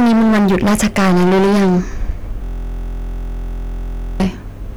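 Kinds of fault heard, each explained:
Hard clipping: the speech was driven about 17 dB past what the stage could pass, so roughly a third of the signal sits on flat-topped, squared peaks in the waveform, with dense harmonics smeared high up the spectrogram, heard as harsh fuzz on every loud syllable.
System hang loop: from 2.44 to 4.2 s a single 23.22 ms fragment repeats about 76 times while the system froze, consistent with a 1024-sample buffer; it sounds like a steady 43.1 Hz buzz, a repeating identical waveform pattern with evenly spaced vertical striations.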